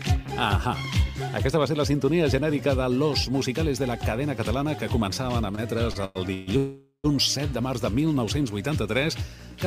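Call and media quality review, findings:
Repeated stalls (stutter), 5.55 to 6.49 s: sound catches and drags four times, longest hold 138 ms, about a third of the span stretched, nothing lost. Jitter buffer repeatedly draining on late or slow packets, last sound extended each time.

Call audio freeze, 6.57 to 7.06 s: held buzz fading to 100 ms of silence, 469 ms inserted, playback resumes where it stopped. Likely packets held in transit, jitter buffer empty, delay increased by 469 ms.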